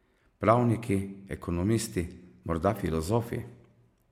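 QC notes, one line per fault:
No fault found, so the QC notes have nothing to list.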